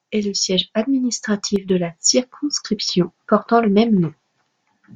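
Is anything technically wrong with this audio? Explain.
Yes. From 1.56 to 1.70 s, just before "la circonscription portant le", the speech abruptly drops about 6 dB, likely because one channel drops out before the mono sum.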